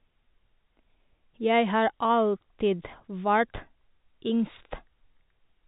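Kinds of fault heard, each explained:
No faults heard in this clip.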